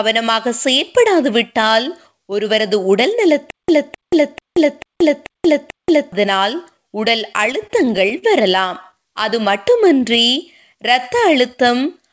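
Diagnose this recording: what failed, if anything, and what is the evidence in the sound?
The playback or stream stage most likely stalled between 3.51 and 6.12 s, re-serving its last fragment on each retry. The result is a stutter with silent gaps. A 0.26 s burst of speech repeats six times, each followed by about 0.18 s of dead digital silence, giving a steady 0.44 s cycle. Whatever speech belonged in that stretch never arrives.

At the network and jitter-buffer stage, packets arrived late often enough to cause repeated stalls (stutter). From 7.46 to 8.24 s the buffer ran dry seven times, the longest gap 40 ms, and concealment filled about 14% of that span. From 8.60 to 8.95 s there were four more, none over 11 ms. The receiver stretched the preceding sound across each hole, so nothing is lost, but the speech drags and catches.

A jitter buffer slow-down follows from 9.39 to 10.24 s. 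Running low or having just raised its target delay, the buffer rebuilt its reserve by repeating pitch periods and pause fragments, adding 66 ms. The speech plays at about 93% speed with unchanged pitch, so the sounds come out slightly drawn out. Through all of this the call codec's band limit holds, with nothing above 8 kHz, which fits a G.722 path.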